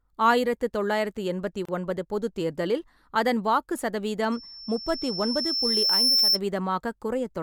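At 1.65 s the speech drops out for about 32 ms, a gap at a join of encoded pieces. Two separately encoded segments were spliced without trimming, so the start-up delay of one encoder run and the padded final frame of the other both remain as silence. The edges are abrupt but smeared by the codec, and the speech resumes exactly where it stopped, with nothing missing.

From 4.32 s to 6.40 s a loudspeaker feedback squeal rises. A microphone is picking up the loudspeaker it drives, and at 5.4 kHz the loop gain exceeds one, so that frequency reinforces itself on every pass. It appears as a single thin, piercing tone that swells over roughly two seconds until it sits around 5 dB above the speech, then stops.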